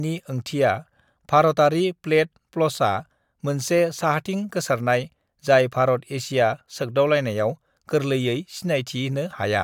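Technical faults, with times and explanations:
No technical faults detected.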